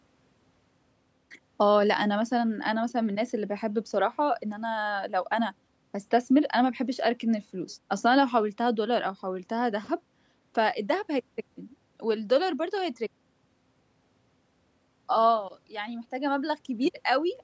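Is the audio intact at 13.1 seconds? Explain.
Yes, the audio is intact at 13.1 seconds, with no fault at that moment.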